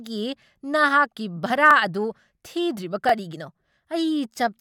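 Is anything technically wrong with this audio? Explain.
Yes, the speech has two repeated buffers, one at 1.71 s and another at 3.09 s. Each time, new audio arrived late, so the device replayed the last block once more. The block is about 21 ms long, which fits a 1024-sample buffer. Unlike a dropout, there is no silence or gap, and nothing is lost; the same fragment simply sounds twice with a hard join.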